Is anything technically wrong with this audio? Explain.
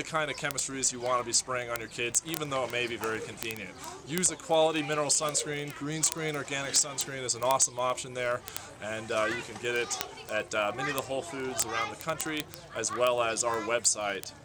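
Yes. Word clock ticks run through the whole clip, from 0.12 s to 14.43 s, as a steady stream of sharp ticks roughly every 30 ms, around 500 in all. The receiving device runs on its own clock, about 700 ppm off the sender's, so each time the clocks slip a single sample is dropped or repeated. On a waveform each tick is a one-sample step. On a spectrogram it is a thin vertical broadband line, evenly spaced.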